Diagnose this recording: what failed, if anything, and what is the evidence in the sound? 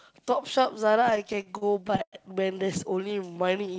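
Repeated stalls (stutter), 1.04–2.15 s: late network packets repeatedly drained the jitter buffer. The spectrogram shows fifteen frozen, smeared stretches, the longest 101 ms, with sound held rather than lost.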